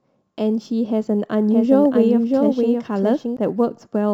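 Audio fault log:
throughout, sample clock jitter: The converter's clock wanders by around 2 microseconds, so each sample lands slightly off time. The resulting error, roughly 45 dB below the speech, is a faint hiss and roughness that swells on loud, bright sounds and disappears in pauses.
1.51–3.37 s, doubled audio track: The likely cause is a second, slower capture path mixed back in, adding a full-band copy of the speech around 0.7 s behind and about 5 dB quieter. It has no room colour and begins and ends abruptly.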